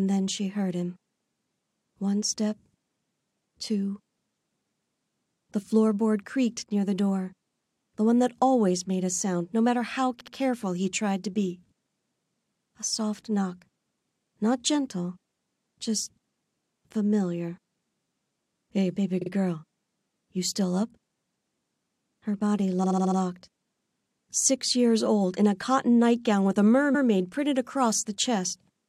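Repeated frames cause four stutters, each replaying a short block of compressed audio. At 10.20 s a 69.7 ms block plays twice more, adding about 139 ms. At 19.21 s a 46.4 ms block repeats twice. At 22.83 s a 69.7 ms block loops five extra times, a 348 ms stammer. At 26.94 s a 116.1 ms block plays once more. Nothing drops out, unlike a dropout or a lost packet: the same fragment recurs and the timeline lengthens.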